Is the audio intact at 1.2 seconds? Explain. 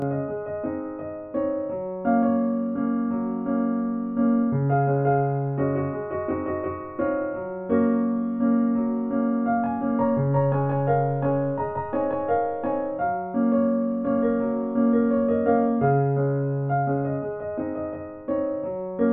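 No. Channel delay (comb filtering) runs throughout: one channel lags about 20 ms, and the mono sum cancels evenly spaced frequencies from around 20 Hz, sounding rough and slightly doubled.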